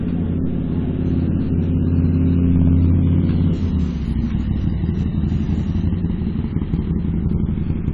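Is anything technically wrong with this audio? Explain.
Yes, there are two faults. The first runs through the whole clip. The top of the spectrum is missing, with nothing above 11.3 kHz. The sound is dull and smeared, with a warbling, fizzy grain on sustained parts. This is likely AAC compression, at a rate that fits about 32 kbps. At that rate the encoder has too few bits for its 1,024 frequency lines per frame. So it drops the highest band and coarsens the rest.

The second fault is hard clipping, from 2.50 to 3.24 s. Here the signal is driven about 2 dB past the level some stage can pass. The peaks are sliced flat. Those flat tops add harmonics high in the spectrum. The overload is modest, so it is heard as a crackle riding the loudest moments rather than a continuous fuzz.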